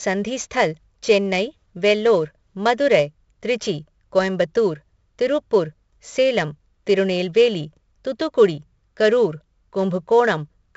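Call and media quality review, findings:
4-bit ADPCM compression, whole clip: each sample coded as a 4-bit step off a prediction, which fits a 64 kbps stream at a low sample rate. Heavy gritty hiss riding loud speech, attacks smeared, nothing above 7.7 kHz.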